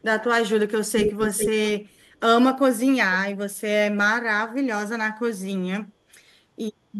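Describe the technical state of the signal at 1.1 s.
At 1.1 s the signal is in an echo leak running from 0.96 to 1.5 s. The likely cause is a far end playing the call over a loudspeaker, with its echo canceller letting part of the microphone pickup through and sending it back. The result is a second copy of the voice trailing the original by about 440 ms, roughly 5 dB quieter than the direct speech, so the two overlap and smear together across that half-second.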